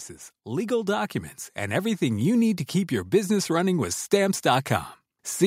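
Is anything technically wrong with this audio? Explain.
Yes. From 0.44 to 4.04 s, automatic gain rising lifts the level by about 8 dB as the gain control compensates for quiet input; voice and background swell together, unlike a deliberate fade.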